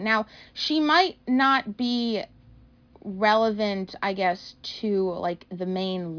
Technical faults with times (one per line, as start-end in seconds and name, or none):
none